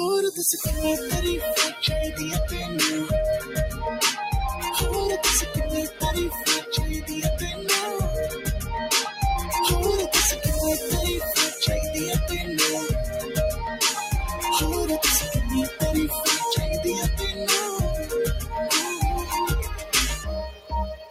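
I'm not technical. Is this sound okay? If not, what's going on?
No. A noise suppressor applied to music or sounds runs throughout: a filter built for speech mistakes steady tones, ambience and lingering tails for background noise and keeps turning them down a little, so the level gently pumps and the sound feels thinner.

Sound cut by the noise suppressor happens at 3.4, 5.9, 6.3, 7.5, 8.3, 19.8 and 20.5 seconds, with the last one running to the end. Each time, the filter briefly pushes a held or fading sound down hard, so it dips or dies early.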